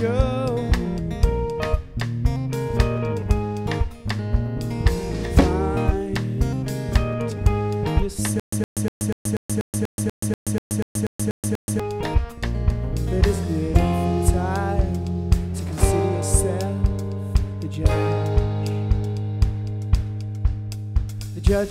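From 8.40 to 11.80 s the audio falls into a stutter with silent gaps. The same 115 ms burst returns 14 times, each followed by 128 ms of dead digital silence, an even 243 ms cycle. That fits a stalled player or stream, likely, replaying its last fragment on each retry. The empty gaps set it apart from a gapless loop repeat.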